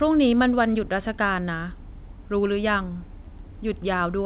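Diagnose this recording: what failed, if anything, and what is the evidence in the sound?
Nothing stood out on listening to this speech recording that would point to a failure at any stage of the chain.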